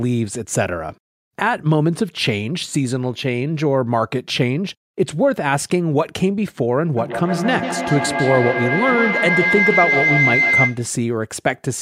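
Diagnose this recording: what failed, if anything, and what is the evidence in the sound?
A shrill tone near 2 kHz builds from 6.97 s until it cuts off at 10.92 s. It pulses roughly every 150 ms and peaks about 1 dB above the speech. This is feedback howl, arising in call processing: two devices on one call share a room, so each loudspeaker's output re-enters a microphone. The loop gains level on every trip around, the repeats swell rather than decay, and the sound collapses onto the 2 kHz region the loop favours.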